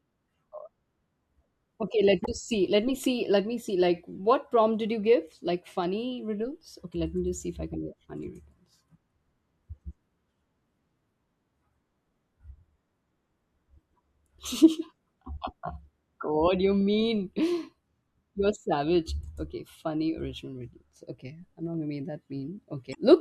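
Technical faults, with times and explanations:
2.22–2.29 s and 22.91–22.97 s, damaged data in a compressed stream: each event is a short burst of about 60 ms, heard as a brief squawk or blip in the speech. Corrupted bytes in the encoded stream made the decoder misread those frames and lose sync, so it produced garbage output until it found the next valid frame header and resumed normal decoding.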